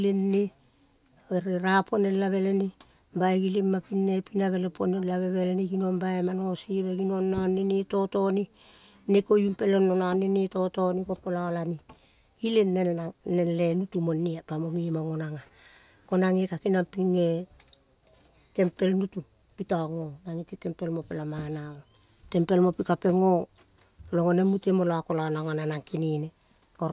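A recording of speech, with no technical faults to be heard anywhere in it. Nothing in the sound calls for a time, a value or a cause to be pointed out.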